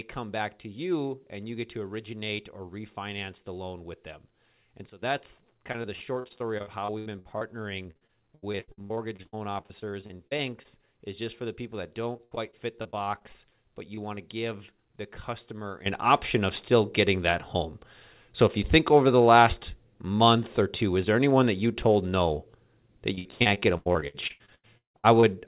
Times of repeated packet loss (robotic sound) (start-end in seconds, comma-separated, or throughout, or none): 5.72-7.43, 7.83-10.66, 12.12-13.57, 23.15-25.24